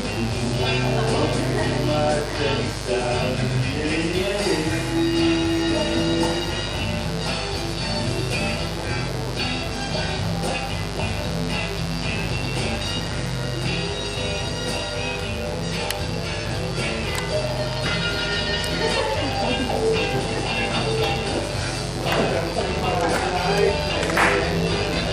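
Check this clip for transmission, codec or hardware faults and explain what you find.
One fault is present: mains buzz running through the whole clip.

From start to finish a steady, raspy buzz sits under the sound, only about 10 dB below it. It comes from mains interference at 50 Hz, where something like a dimmer, a rectifier or an unshielded connection injects sharp switching spikes twice per cycle. Those spikes produce a dense series of harmonics of 50 Hz stretching up into several kHz, which gives the buzz its rough, edgy character.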